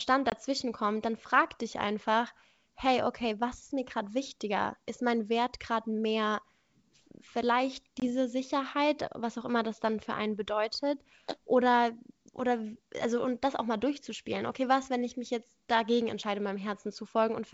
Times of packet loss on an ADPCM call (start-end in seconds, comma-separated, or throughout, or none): 0.30-0.33, 8.00-8.09